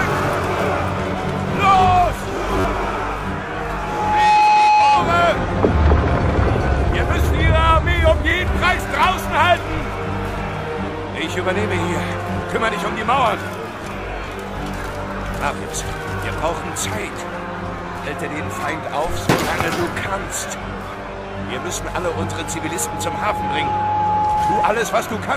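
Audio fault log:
2.60–2.65 s, repeated buffer: new audio arrived late, so a piece of about 10.7 ms, which fits a 512-sample buffer, replayed four extra times with hard joins. The rapid repeats form a brief buzz, and roughly 40 ms of audio is lost.
3.65–5.21 s, loudspeaker feedback squeal: the microphone picked up its own loudspeaker, and loop gain above one at 845 Hz let that tone feed itself. It swells in under a second to about 10 dB above the program before stopping.
21.64–24.81 s, loudspeaker feedback squeal: the same 845 Hz loop builds again, more slowly, rising over about two seconds. It settles about 5 dB above the program and holds as a sustained howl until 24.81 s.
22.23 s, repeated buffer: during the second squeal, one 10.7 ms buffer played a single extra time. It is heard as a click at the hard join, and about 10 ms of new audio is lost.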